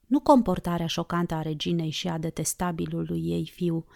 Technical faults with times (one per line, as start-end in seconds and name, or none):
none